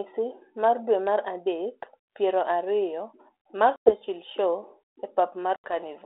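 At 3.76 s the speech drops into a hard-edged gap until about 3.91 s, about 100 ms lost, and again from 5.56 to 5.74 s, with 80 ms lost: packet loss on an ADPCM call, a handful of packets each time. On the waveform each gap is flat silence with vertical edges. Afterwards, the G.726 decoder's predictor and step size no longer match the sender's, so the speech resumes with brief, slight distortion that settles within some tens of milliseconds.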